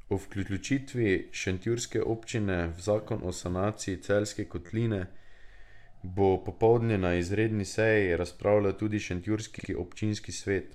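The speech has repeated frames at four points, heard as stutters where a short span plays again. At 0.45 to 0.59 s a 129 ms block is heard twice. At 4.66 to 4.69 s an 11.6 ms block repeats three extra times, and at 6.86 to 6.88 s an 8.7 ms block does the same. At 9.58 to 9.69 s a 42 ms block plays two extra times. Compressed frames were written or sent more than once, and each repeat lengthens the audio, by roughly 0.3 s in all.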